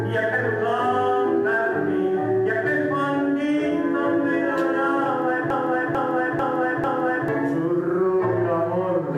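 A stall in the player, encoder or stream is the likely cause of a broken-record loop from 5.50 to 7.28 s: the last fragment held, about 445 ms long, repeats exactly four times back to back, and the audio that belonged in that span is lost.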